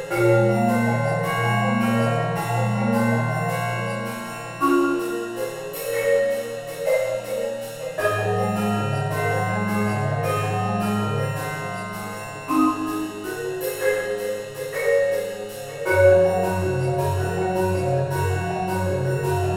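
Nothing in the audio stood out as a technical problem on listening.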